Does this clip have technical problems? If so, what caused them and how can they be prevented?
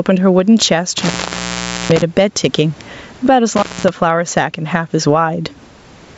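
Yes. Gain pumping runs throughout: the level swings by around 15 dB under loud sounds, likely from a fast limiter reacting to excessive microphone gain. Lower the input gain so the limiter rarely engages.

Intermittent contact cuts the sound out from 0.98 to 2.02 s and from 3.56 to 3.89 s, with crackle at each edge, as a loose cable or plug briefly opens. Reseat or replace the cable and secure the connector.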